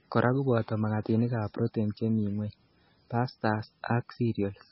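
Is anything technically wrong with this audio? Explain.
Yes. Throughout the speech the sound is dull and watery, with nothing above 5.6 kHz and a swirly, chirping texture on s sounds. This is likely heavy MP3 compression. Short of bits, the encoder cuts the treble and lets weak frequency lines flicker between frames, which fits a bitrate near 18 kbps.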